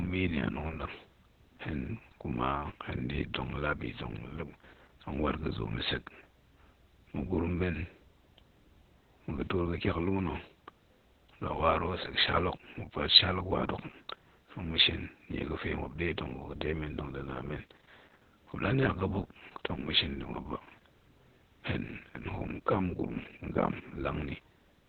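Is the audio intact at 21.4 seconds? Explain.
No. At 21.4 seconds the speech carries Opus voice compression, which runs through the whole clip. The coder is working in its SILK linear-prediction mode at narrowband, so nothing is heard above about 4.2 kHz, and it codes the excitation coarsely, which fits a very low rate near 8 kbps. The speech sounds muffled, hoarse and slightly robotic. A simple low-pass filter would only muffle, but here the voice's grain itself is roughened and buzzy.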